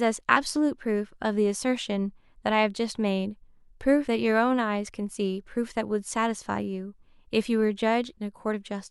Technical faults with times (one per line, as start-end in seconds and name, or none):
0.35 compressed frames skipped
4.07 compressed frames skipped
8.52 compressed frames skipped